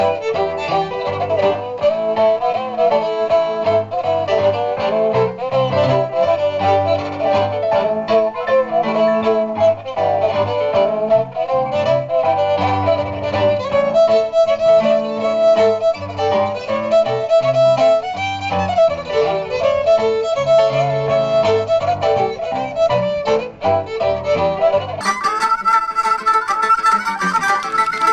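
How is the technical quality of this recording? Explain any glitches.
There's one real glitch, and it's right at the end. From 25.01 s to 28.12 s the audio has a wrong sample rate problem: it's suddenly running at double speed and sits a full octave (12 semitones) higher. That's what happens when samples get played back at a different rate than they were recorded at, with no conversion. Here the ratio is exactly 2, which fits material captured at 16 kHz being played out at 32 kHz.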